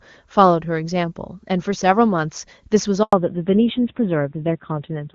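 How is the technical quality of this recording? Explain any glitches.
The quality is sound until about 3.03 s; two linked faults follow. Before that, the speech is clear HD Voice, fitting the top AMR-WB rate near 23.85 kbit/s.

Handover gap, 3.03 to 3.13 s: the call switched networks and no speech frames arrived, so the speech fades quickly into a 100 ms silence.

Fallback to narrowband, from 3.13 s to the end: the new link uses an older narrowband codec, apparently AMR-NB near 7.4 kbit/s, so nothing above 4 kHz remains and the speech sounds duller and rougher.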